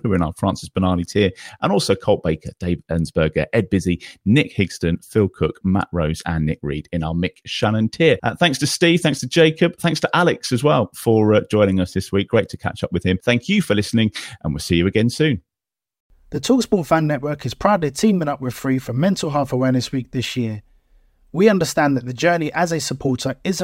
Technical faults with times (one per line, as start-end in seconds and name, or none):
none